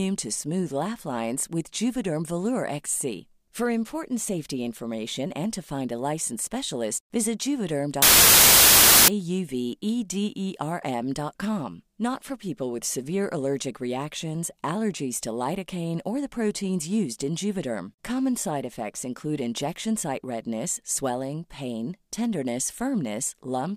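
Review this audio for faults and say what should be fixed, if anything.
Samples built from the wrong bytes, from 8.02 to 9.08 s: for just over a second the speech is buried under loud, harsh broadband noise. The reader has assembled each sample from misaligned or swapped bytes, so the rapidly fluctuating low-order bits land in the most significant position and dominate every value. To prevent it, check the declared sample width, byte order and frame alignment against the data before decoding, and resynchronise on frame boundaries after any dropped or inserted byte.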